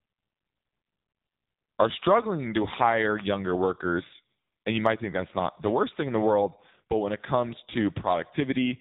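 Across the whole recording the speech carries heavy AMR narrowband mobile codec damage: nothing above 3.8 kHz survives, and the pulse-driven vocal-tract model leaves voicing buzzy and synthetic, which fits a low AMR-NB mode near 6.7 kbps.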